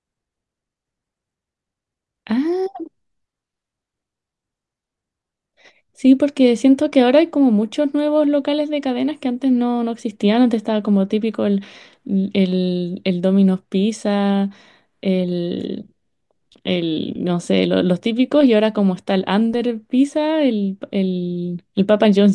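Nothing stood out as a technical fault on listening to this speech recording.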